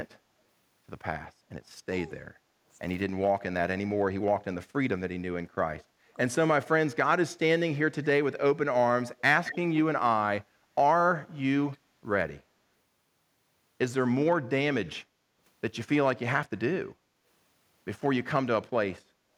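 From 1.32 to 9.18 s the speech is repeatedly turned down, dipping by roughly 20 dB at worst and losing around three seconds in total, in pieces. This is speech suppressed in double talk. The likely cause is both ends talking at once, with the echo canceller unable to tell the local talker from loudspeaker echo and attenuating both.

Between 9.19 and 9.57 s a delayed copy of the voice follows about 219 ms behind, at about 10 dB below the speech. This is an echo leak, likely from loudspeaker pickup at the far end that its echo canceller did not fully remove and sent back down the line.

The same double-talk suppression returns in smaller bursts. At 10.52 to 10.67 s the speech drops by about 10 dB, and at 12.49 to 12.56 s by about 5 dB. From 14.44 to 17.25 s it dips intermittently by about 10 dB, for well under a second in all. From 19.02 to 19.36 s there is a further shallow dip of about 5 dB. 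Each is likely caused by the canceller clamping down during overlapping talk.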